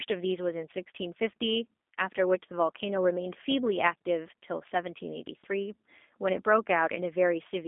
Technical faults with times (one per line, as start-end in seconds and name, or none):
0.00-7.67 G.729 codec